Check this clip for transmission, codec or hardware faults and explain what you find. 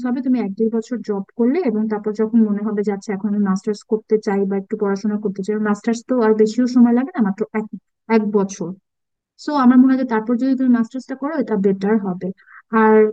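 Nothing stood out as a fault on listening to this speech recording.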